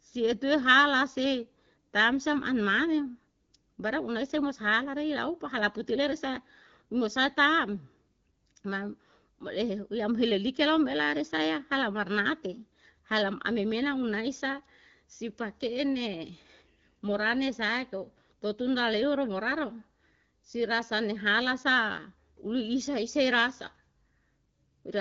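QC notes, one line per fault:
Nothing stood out on listening to this speech, which is carried over an AMR wideband (HD Voice) link at 12.65 kbit/s with its audio band ending near 6.9 kHz.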